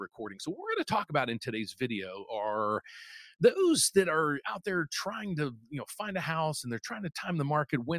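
Sound cut by the noise suppressor, from 5.56 to 5.72 s: the suppressor mistook this stretch for noise and pulled it down harder than its surroundings, by about 14 dB at the deepest point. For roughly 150 ms the sound sinks, then returns to its normal level.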